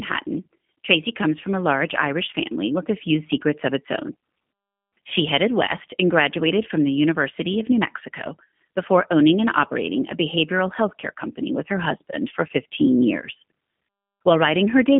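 From start to finish the speech carries the G.729 codec's character, and the particular roughness suggests its G.729A form, which fits an 8 kbit/s VoIP stream. The speech is rebuilt from a vocal tract filter, a pitch predictor and a few pulses per short frame, so it comes across plainly rough and synthetic. On a spectrogram the energy sits in a telephone band of about 150 Hz to 3.5 kHz, with nothing above 3.6 kHz.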